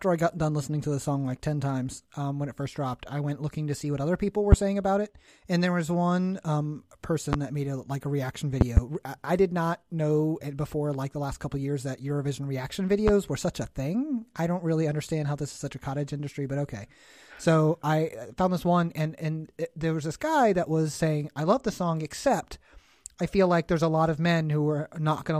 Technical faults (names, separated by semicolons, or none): loud pop